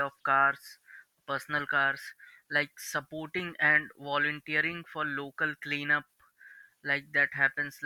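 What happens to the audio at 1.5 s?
Nothing goes wrong at 1.5 s; the speech carries on intact through that moment.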